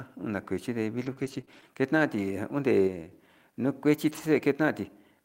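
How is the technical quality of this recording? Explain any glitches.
The recording has three distinct glitches, each confined to a short stretch.

From 1.01 to 1.63 s the sound turns choppy, with a few brief holes, the longest about 21 ms and roughly 60 ms missing in all. This is repeated packet loss: packets kept arriving late or not at all, and the decoder bridged each hole by extending the preceding sound.

Between 2.87 and 3.11 s the level abruptly falls by about 5 dB, speech and background noise dropping together rather than fading. That instant, unramped step is a sudden gain jump, most likely a digital gain setting applied from one sample to the next.

From 4.09 to 4.19 s there is no gap, but about 60 ms of speech sounds rougher and noisier. This is a lost packet rebuilt from error correction, which points to three lost packets. Each was replaced by the low-bitrate backup copy carried in the packet that followed it.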